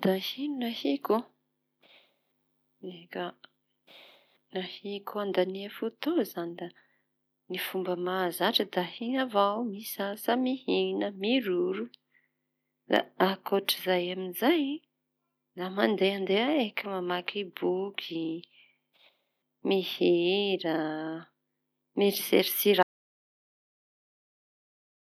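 At 22.83 s the speech cuts out and the last 2.3 seconds are silent, with no room tone at all, so it's an audio dropout to silence that never recovers. Most likely the input was lost or muted while recording carried on writing silence.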